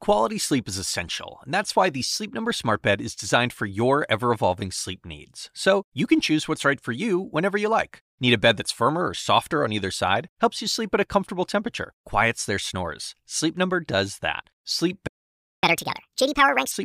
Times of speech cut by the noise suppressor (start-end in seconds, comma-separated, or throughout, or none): none